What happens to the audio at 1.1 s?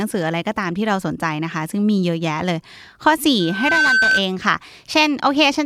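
Nothing goes wrong at 1.1 s: the speech there plays through intact, with no dropout, click or distortion.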